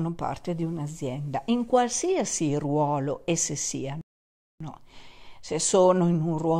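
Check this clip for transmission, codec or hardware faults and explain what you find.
One fault is present: a playback stall. From 4.01 s to 4.60 s the speech cuts to silence mid-flow for 592 ms. The likely cause is the player running out of buffered data or its output thread being blocked, leaving nothing to send until it recovered.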